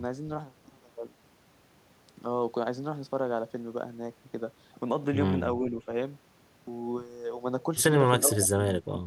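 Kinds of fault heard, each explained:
Speech suppressed in double talk: the speech is turned down in short stretches, slightly near 5.6 s and by about 20 dB near 8.2 and 8.9 s, likely an echo canceller muting overlapping talk. It is an attenuation, not clicks or repeated fragments from packet loss.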